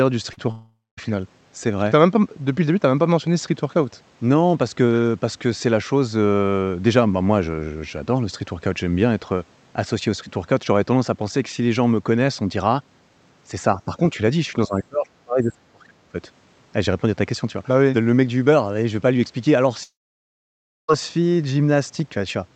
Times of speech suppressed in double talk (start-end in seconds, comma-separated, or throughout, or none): 13.85-14.00, 14.68-16.15